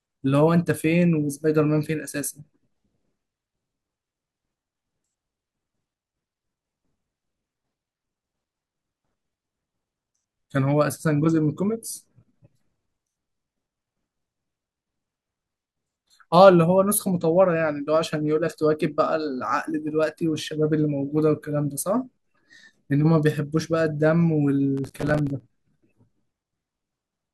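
From 24.77 to 25.40 s the speech breaks into a burst of gritty crackle, a rapid run of tiny dropouts with hard edges that tears through the sound for about 0.6 s and then stops. This is processor overload crackle: the processor fell behind and missed its deadlines repeatedly, about twenty times, leaving a brief silent hole each time. The size of the holes fits a buffer of around 5 ms.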